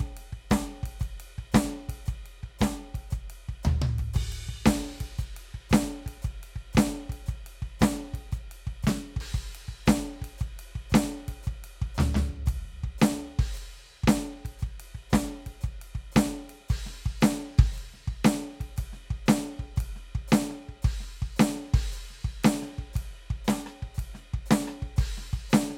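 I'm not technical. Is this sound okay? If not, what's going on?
Yes, no faults here.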